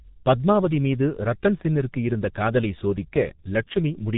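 From start to finish the speech carries heavy G.723.1 codec damage. Everything above 4 kHz is gone, so it sounds muffled, and the slow-updating voice model leaves it hoarse with smeared consonants, which fits a very low-rate stream around 6 kbit/s.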